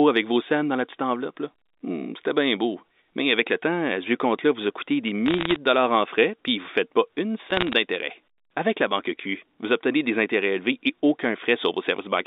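From 5.26 to 5.56 s, between "vous a coûté des" and "de dollars en frais", bit errors on the digital phone line break through the narrow 250 Hz to 3.7 kHz G.711 band as crackle. Each flipped bit corrupts a single sample, and hits on the sign or upper bits produce sharp ticks, here at an error rate somewhat under one percent. A sparser burst follows at 7.50 to 7.73 s, just after "ne faites pas une".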